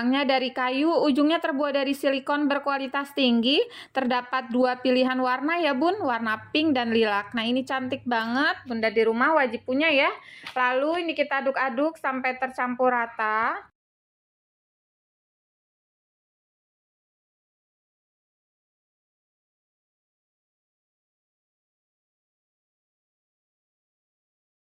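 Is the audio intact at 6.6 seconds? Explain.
Yes, the audio at 6.6 seconds is intact, with no dropout, click, distortion or other fault at that point.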